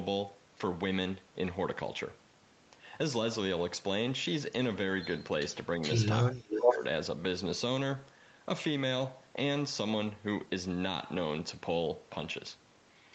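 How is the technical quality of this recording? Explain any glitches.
The recording has two kinds of call-path fault, both in the middle of the clip, and the band stops at 8 kHz as expected for an Opus call.

Echo leak, 5.82 to 6.04 s and 6.55 to 6.78 s: a delayed copy of the speech returns roughly 0.42 s after the original. The likely cause is a far-end loudspeaker whose echo canceller let part of the signal back into its microphone. The first scrap sits about 10 dB under the main speech. The second is louder than the speech, by around 5 dB. Unlike reverberation, it is a distinct, late repeat rather than a smeared tail.

Speech suppressed in double talk, 6.28 to 6.82 s: the main speech dips by up to around 15 dB across about half a second, overlapping the second echo burst. This is likely an echo canceller that could not separate the local talker from the returning echo and attenuated both. 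It differs from a network dropout because the level ducks and recovers in pieces while the competing signal is present, instead of cutting to silence or filling with concealment noise.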